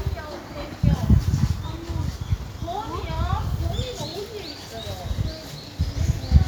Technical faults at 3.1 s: none

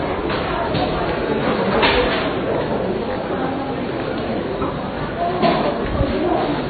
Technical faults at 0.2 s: transcoding between lossy codecs

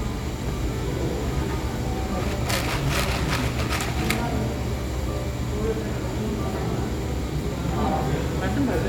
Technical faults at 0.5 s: none

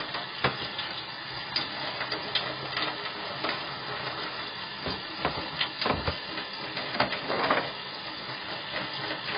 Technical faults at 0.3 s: low-bitrate audio saved at a high bitrate

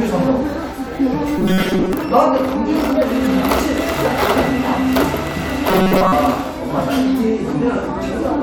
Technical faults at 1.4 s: robotic sound from repeated short buffers

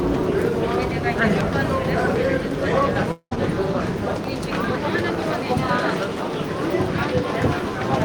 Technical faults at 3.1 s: long network dropout

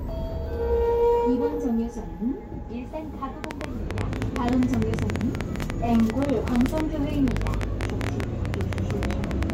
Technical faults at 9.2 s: train of clicks

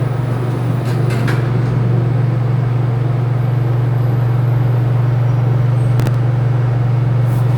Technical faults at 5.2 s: none

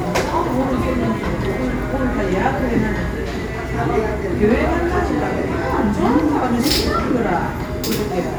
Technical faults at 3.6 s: none

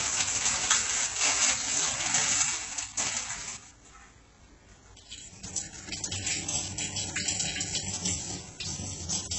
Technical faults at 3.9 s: HE-AAC compression

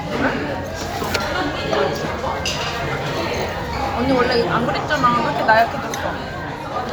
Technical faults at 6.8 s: none

